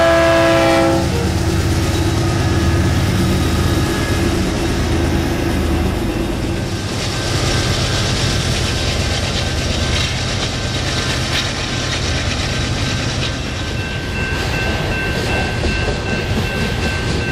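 Hard clipping runs through the whole of this audio. The signal is pushed about 4 dB past what one stage in the chain can pass, so only a few percent of samples, the loudest peaks, get sliced flat. Those flattened tops throw off high harmonics, heard as brief crackle on peaks rather than a constant fuzz. Unlike soft saturation, which rounds peaks into a warm thickening, this edge is abrupt and gritty, appearing only when the level spikes.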